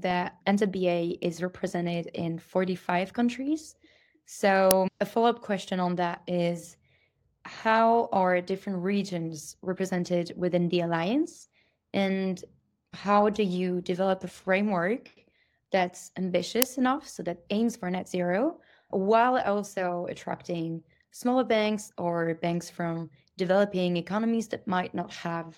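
The speech clip has two uninitialised buffer faults, at 4.71 s and 16.62 s. Each is a very short, loud crack, just before "a follow up question" and "enough so that aims". Leftover memory was played as audio. The roughly 3 ms length fits a 128-sample buffer.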